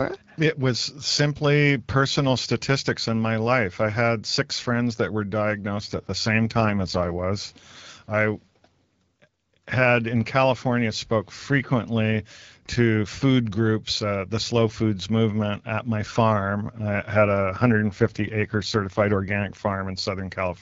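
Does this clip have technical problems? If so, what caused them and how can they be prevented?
Yes. From 5.77 to 7.24 s and from 17.13 to 20.02 s the speech turns rougher and more synthetic, with no gap or narrowing of the band. This is an AMR rate drop. It fits the wideband codec falling from 12.65 to 8.85 kbit/s on a weak radio link. Better radio coverage prevents it.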